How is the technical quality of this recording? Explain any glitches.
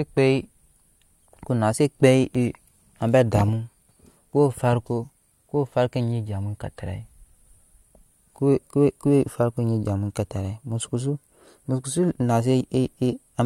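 The speech has one glitch, an electrical switching spike at 2.35 s, just after "na se". It is a sharp snap laid over the audio at moderate level, near -20 dBFS, likely from a nearby switch or static arc coupling into the line. Unlike a digital dropout, nothing is cut from the underlying sound.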